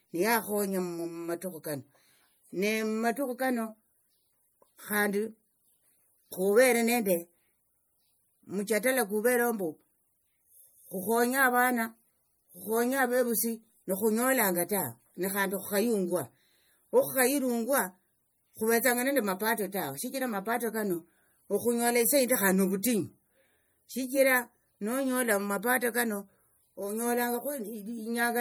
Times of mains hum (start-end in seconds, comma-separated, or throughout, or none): none